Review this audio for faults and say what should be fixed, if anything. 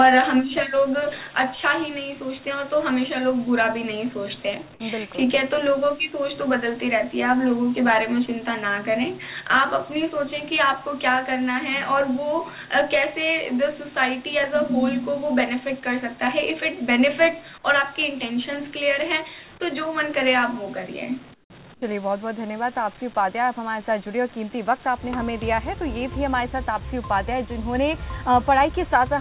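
Two short stretches of comfort noise in place of the background turn up, at 21.34 to 21.5 s (160 ms) and at 21.74 to 21.82 s (80 ms). The real background, already about 27 dB under the loud parts, drops out and a flat, featureless hiss fills in, about 18 dB quieter the first time and about 6 dB the second. That's likely discontinuous transmission on the sender cutting audio during pauses. The band tops out at 4 kHz, as G.711 A-law does. Disable DTX/VAD on the sending side, or raise the comfort-noise level to match the real background.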